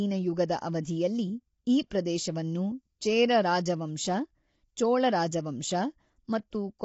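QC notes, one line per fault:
Throughout: low-delay AAC compression. The speech comes across rough and grainy, with noise filling the gaps between harmonics and nothing above 7.8 kHz, so the top end sounds dull. That's likely AAC-ELD at a low rate, around 24 kbps, whose short frames smear pitch harmonics.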